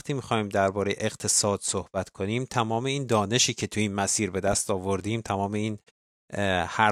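At 4.48–4.56 s, a loud pop: two thumps about 10 dB over the speech, likely a voltage spike; twin waveform spikes, broadband vertical spectrogram stripes.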